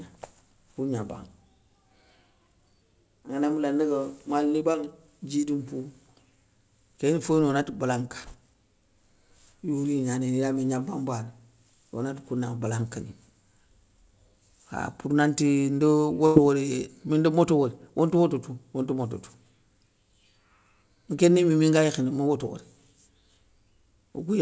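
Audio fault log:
4.72–4.76 s, short concealed packet loss: about 20 ms of the call arrived too late to decode, so the receiver extended the preceding sound to cover the hole before blending back into the real audio. The result is a brief smear or wobble.
16.26–16.38 s, burst of packet loss: roughly 100 ms of consecutive audio never reached the decoder, and the receiver filled 96 ms by continuing the last sound while fading it down. This produces a held, dwindling stretch, and the sound resumes further on with that segment gone. The concealment follows the same G.722 path whose band stops at 8 kHz.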